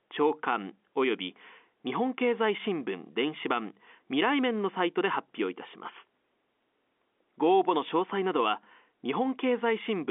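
Nothing stood out on listening to this speech clip, which comes across as ordinary telephone-band audio.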